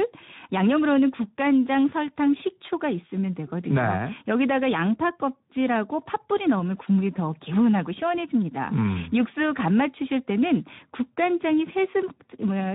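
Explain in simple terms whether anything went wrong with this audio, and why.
The voice sounds hoarse and grainy from beginning to end, with a thin, hissy top instead of clear crisp detail. That comes from Speex codec compression, an older speech squeezer from internet calls and game chat. It rebuilds the voice from a rough model plus a small budget of detail, so some character is lost, and any upper treble that survives is just shaped noise rather than the real sound.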